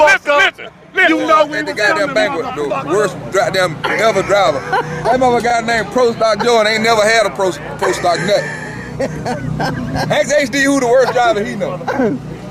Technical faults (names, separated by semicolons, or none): none